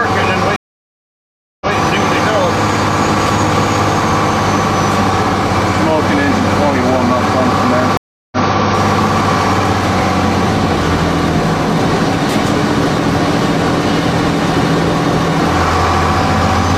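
A stream reconnect at 0.56 s and again at 7.97 s: the connection dropped, and the player restarted a fresh decoder mid-stream. The audio goes silent for 1.05 s, then 0.35 s, and resumes 0.14 s and 0.19 s earlier, repeating material.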